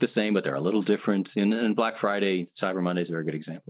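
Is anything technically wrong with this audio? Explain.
No, nothing is technically wrong.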